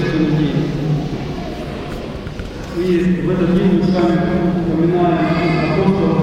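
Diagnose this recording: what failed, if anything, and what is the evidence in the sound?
Nothing failed; no fault is audible anywhere.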